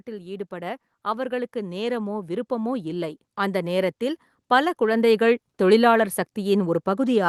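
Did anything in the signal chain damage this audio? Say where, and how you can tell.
Yes. In the call processing, automatic gain rising: the gain control judged the input too quiet and kept raising its gain from 0.05 s to 5.48 s, by about 12 dB in total. Speech and background noise swell together over those five seconds.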